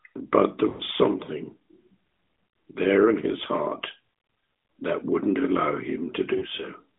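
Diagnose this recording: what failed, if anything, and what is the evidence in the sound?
Lost AMR speech frames on the radio link. From 0.70 to 0.82 s the speech stretches and fades, about five frames' worth. Another 40 ms dropout comes at 6.38 s.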